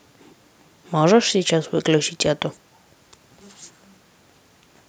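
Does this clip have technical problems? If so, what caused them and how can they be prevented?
No, there are no technical problems in this clip.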